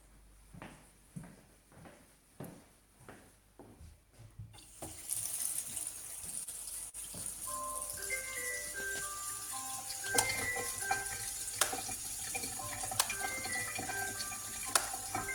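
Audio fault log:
6.31–6.96 s, repeated stalls (stutter): The sound catches four times in quick succession. Packets arrived late, so the jitter buffer kept running dry. Each gap was bridged by extending the last sound, about 80 ms in total, longest 44 ms. Nothing is lost, but the passage drags and stutters.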